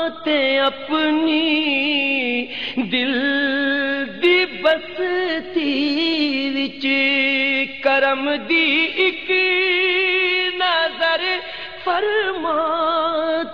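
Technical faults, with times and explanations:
Nothing stood out on listening; no technical problem could be heard anywhere in the audio.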